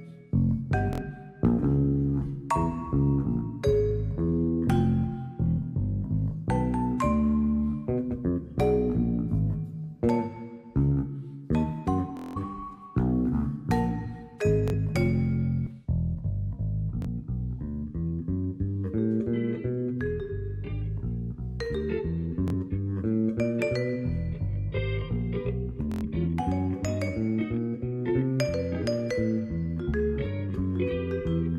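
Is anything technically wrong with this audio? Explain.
Yes. At 0.93, 12.17, 14.68, 17.02, 22.48 and 25.92 s, the sound catches and repeats a tiny slice in a rapid machine-gun buzz. This is Bluetooth stutter. Wireless packets arrived late or not at all, so the receiver replayed its last short buffer, roughly 23 ms, until fresh data came. Playback then resumes further on. The gaps last about 46 ms for the middle three, 70 ms at 0.93 s, 116 ms at 25.92 s, and a longest 186 ms at 12.17 s.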